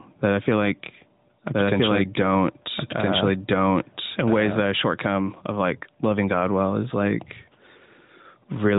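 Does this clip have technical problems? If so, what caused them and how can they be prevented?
Yes. Gain pumping runs throughout: input gain was likely set too high, so a fast limiter clamps each loud burst of speech, making the gain swing by around 5 dB. Lower the microphone gain so the limiter rarely engages.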